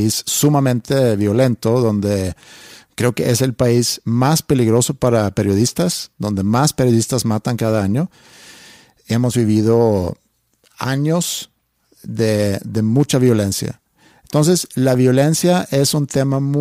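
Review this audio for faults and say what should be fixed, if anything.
Four sharp clicks occur in the speech, at 0.80, 3.09, 4.38 and 14.95 s. Each shows as one thin vertical line across the spectrum. They are likely dropped samples. A fraction of a millisecond goes missing, so the waveform jumps abruptly to a later value. Give the capture and processing chain enough buffer headroom that it never skips samples.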